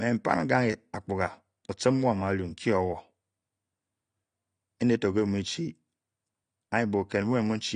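From start to finish the speech sounds dull, with nothing above about 9.7 kHz, plus a watery warble and fizzy sibilants. That's the signature of AAC compression, likely AAC-LC at a low rate, somewhere around 32 kbps, where the encoder drops the top end and starves the remaining bands.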